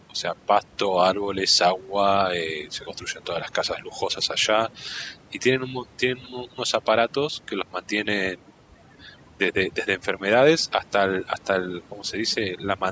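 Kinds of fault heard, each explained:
Overdone noise removal: the denoiser is pushed too hard throughout, muting bands near its noise estimate, so the background goes hollow with twinkly specks.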